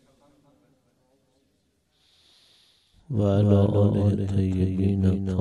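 A second copy of the audio, about 5 dB quieter, trails the original by about a fifth of a second throughout, giving a clean slap-back doubling with no decay or room colour. This doubled audio track likely comes from the same signal being captured again through a slower path.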